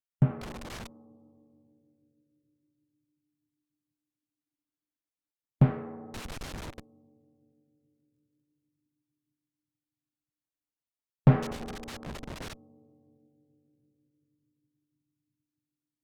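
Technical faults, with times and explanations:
0.41–0.87 s, 6.14–6.80 s and 11.43–12.53 s, loose connector crackle: three irregular bursts of scratchy crackle, lasting from about half a second to just over a second, break into the sound. A worn or dirty contact in the signal path keeps making and losing connection as it shifts, so the audio is chopped on and off in rapid, uneven fragments. Any DC on the line jumps at each break, adding sharp pops to the rough, gritty texture.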